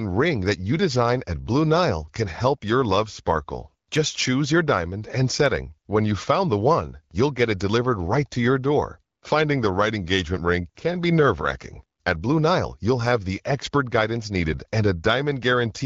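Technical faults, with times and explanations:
No technical faults found.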